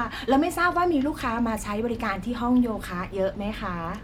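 No technical faults can be heard in this recording.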